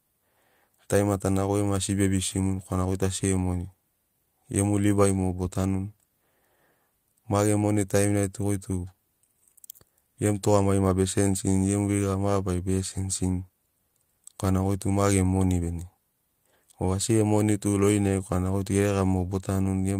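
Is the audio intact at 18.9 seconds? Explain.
No. Repeated timing corrections run from 0.17 to 19.93 s, so 18.9 s falls inside them: the receiver keeps cutting short pieces to keep pace, heard, if at all, as faint hiccups or an unsteady tempo. Underneath is clock drift between sender and receiver, with the sender's clock running roughly 4 percent fast, which makes the jitter buffer keep overfilling.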